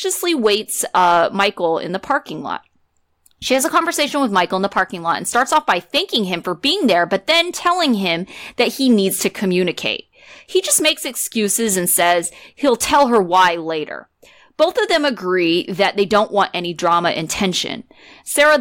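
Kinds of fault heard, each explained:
Hard clipping: the speech is driven about 6 dB beyond what one stage of the chain can pass, so its loudest peaks are sheared off flat. Only a small fraction of samples, under one percent, reach that ceiling, so the damage comes as brief crackle and grit on the strongest syllables across the whole clip. A waveform view shows flat-topped peaks pressed against the limit, and a spectrogram shows short vertical smears of added harmonics reaching high up the spectrum at those peaks.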